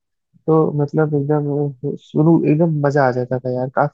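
No technical faults can be heard in this speech recording, so there are none to describe in time order.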